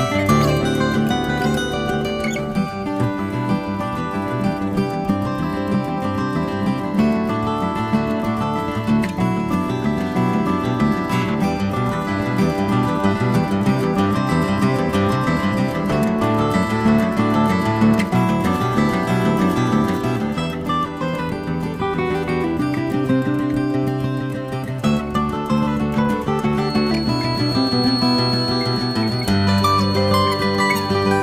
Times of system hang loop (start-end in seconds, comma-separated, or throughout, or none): none